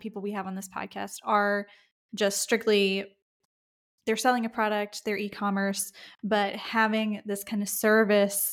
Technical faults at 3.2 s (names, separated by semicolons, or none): none